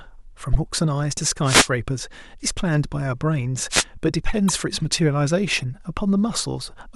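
Damaged data in a compressed stream breaks into this speech recording at 0.53 to 0.56 s and again at 4.48 s, each a brief chirp or blip. Corrupted bytes in the encoded stream leave the decoder unable to read the frames at those points, so it loses its place and searches for the next valid frame header before resuming. A wireless microphone noise hit follows at 1.44 to 1.69 s and again at 3.70 to 3.84 s, heard as swishes of static washing over the talker. These come from the FM radio link: reflected copies of the transmitter's signal cancel the direct path, the received level dips, and the receiver's own noise rises to mask the audio. The first hit lasts about a quarter of a second, and the second is shorter, at roughly 0.14 s.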